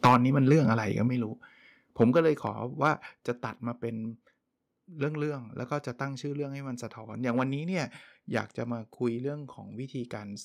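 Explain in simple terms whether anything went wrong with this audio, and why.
Right at the start, from 0.05 to 0.16 s, there's microphone overload: the loudest bit hits the converter's limit and crackles, likely from the input being set too high. Then the microphone volume steps down at 0.07, 1.08, 2.13 and 3.15 s, with the speech suddenly dropping quieter each time, likely the call software turning the mic down.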